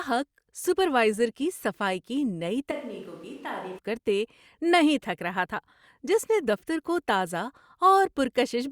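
Switch to a distant microphone, 2.71–3.78 s in this speech clip, after "کی نئی" and before "کرتے نہیں تھک رہا": the sound turns suddenly hollow and roomy, about 10 dB quieter, with more background noise, about 25 dB below the speech. The likely cause is the close microphone dropping out.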